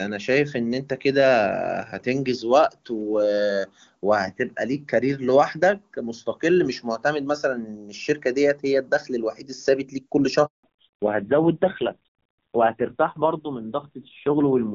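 At 10.46 s the speech cuts off abruptly, dying away within a few tens of milliseconds, and there is dead silence for 180 ms until 10.64 s. This is a handover gap: the call was switched from one network link to another, and no speech frames came through while the connection moved, so whatever was said in that stretch is simply gone rather than garbled.

From 10.64 s to the end, the speech comes back duller, muffled and rougher. This is a fallback to narrowband: after the handover, the call dropped from the wideband HD Voice codec, which until then carried clear, full-sounding speech consistent with AMR-WB at a high rate around 23.85 kbit/s, to an older narrowband codec. Nothing above 4 kHz survives, and the roughness points to a low AMR-NB rate near 5.9 kbit/s.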